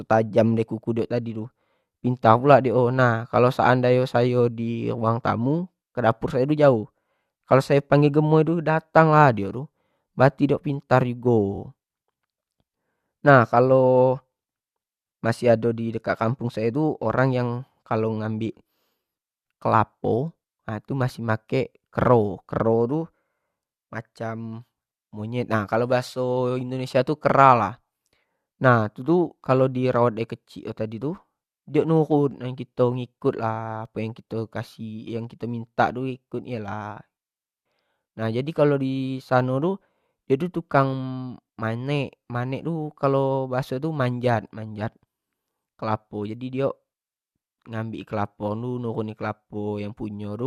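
Repeated frames at 11.54–11.59 s and 18.58–18.60 s: a short compressed block, about 23.2 ms long (which fits a 1024-sample frame at 44.1 kHz), was played again, twice at the first point and once at the second. Each repetition adds a brief stutter, lengthening the speech by 46.4 ms and 23.2 ms.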